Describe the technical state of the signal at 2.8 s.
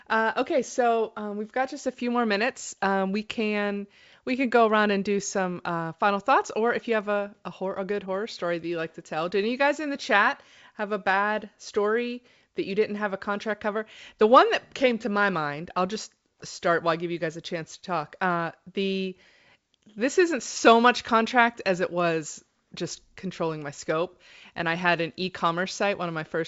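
At 2.8 s the signal is intact, with no fault to be heard, just clean G.722 wideband telephone coding carrying the speech with content up to about 7.7 kHz.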